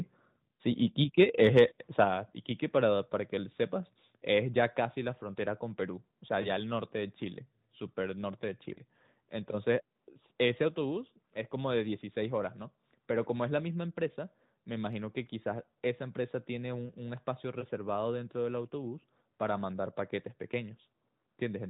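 Between 1.19 and 1.64 s, and again from 2.00 to 2.04 s, the loudest peaks turn harsh and crackly, with their tops flattened. This is likely microphone overload, with the input driven about 4 dB and then about 5 dB past the converter's limit.

At 2.04 s, right after that second distorted peak, the sound and the background both drop suddenly by about 6 dB. At 10.68 s there is a smaller drop of about 3 dB. Both are likely the microphone volume being stepped down by the call software, which lowered the device's input gain in a single step.

From 6.42 to 6.49 s and from 8.74 to 8.79 s the sound gives a short dip and warble. These are lost AMR speech frames, one 20 ms frame each time. The decoder covered each gap by repeating the last good frame at falling gain.

From 16.86 to 16.91 s two consecutive frames, 40 ms in all, are lost. Here the sound is briefly smeared and fades before recovering. 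All of this is carried over the AMR narrowband mobile codec, which cuts everything above 4 kHz and leaves light coding artefacts that fit its 12.2 kbps mode.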